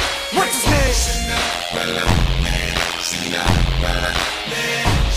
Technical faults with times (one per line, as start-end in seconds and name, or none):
1.52-4.25 overlap-add ripple